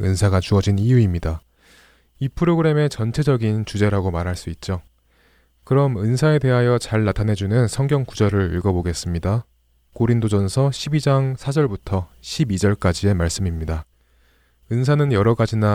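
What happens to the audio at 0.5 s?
Nothing goes wrong at 0.5 s; the speech plays through that moment intact, with no dropout, click, distortion or other fault.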